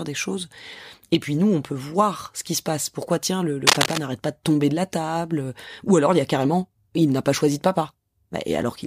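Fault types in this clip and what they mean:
Cable scratch noise: a dense, uneven scratching burst from 3.67 to 3.99 s, after "tiens le", louder than the speech; likely a worn connector's contact resistance fluctuating.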